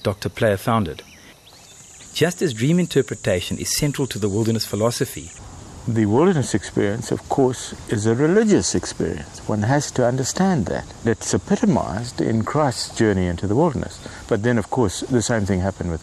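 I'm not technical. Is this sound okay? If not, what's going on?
Yes, the sound is okay. I can't hear anything wrong with it, so there's nothing you need to fix.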